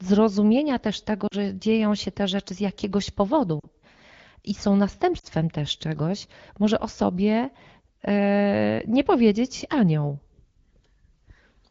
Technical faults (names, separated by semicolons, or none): lost AMR speech frames